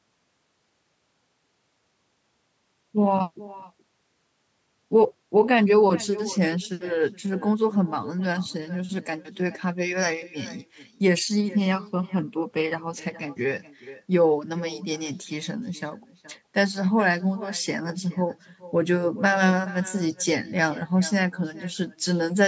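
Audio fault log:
Throughout: echo with no canceller. The far end plays the call over a loudspeaker, its microphone picks that playback up, and nothing subtracts it before it is sent back, so the speech returns after the network round trip, roughly 400 ms later. Every phrase is trailed by a faint copy, about 19 dB down, sounding thin. Both the speech and its echo stop at 8 kHz, which is the call path's normal bandwidth.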